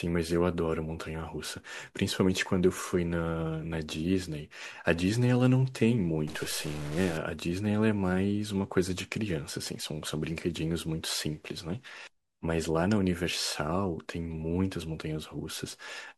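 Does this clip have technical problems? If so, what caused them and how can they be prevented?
Yes, there's one problem. From 6.28 to 7.17 s the speech picks up a harsh, buzzy grit, and the gaps between sounds fill with a noise floor somewhere around -40 dBFS. That's the signature of a stuck bit, likely from a faulty data line or converter: one bit frozen at 0 or 1 knocks roughly half the samples off by its weight, and near silence it flips with the waveform's sign, hence the noise. To prevent it, check cabling and converter hardware and run a bit-integrity test on the interface.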